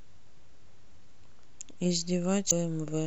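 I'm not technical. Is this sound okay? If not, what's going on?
No. At about 2.47 s, for roughly 0.06 s, there is a brief glitch in the speech caused by damaged data in a compressed stream. Part of the stored file is corrupted, so the player misreads that stretch and loses its place.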